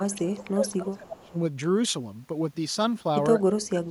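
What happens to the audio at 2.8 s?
Nothing goes wrong at 2.8 s: the speech plays through that moment intact, with no dropout, click or other fault.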